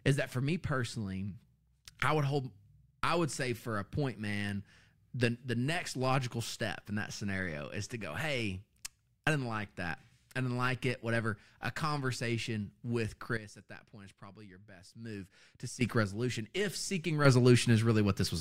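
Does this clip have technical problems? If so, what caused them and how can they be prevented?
Yes. A sudden gain jump drops the level by about 12 dB from 13.37 to 15.81 s, after "conversation with", and another raises it about 8 dB from 17.25 s to the end. The waveform envelope and the background noise step together, likely from unramped digital gain changes. Ramp every gain change.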